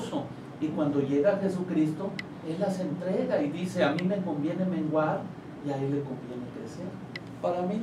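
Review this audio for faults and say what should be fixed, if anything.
No faults found; nothing needs fixing.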